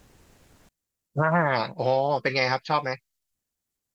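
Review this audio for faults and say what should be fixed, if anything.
From 0.69 s to the end, the speech falls by about 34 dB to a faint residue. This is the sign of one channel inverted, likely from a flipped polarity setting or miswired lead, so the shared centre cancels when the channels are summed to mono. Unlike a dropout, a trace of difference signal remains rather than silence. Check and match polarity on both channels before any mono fold-down.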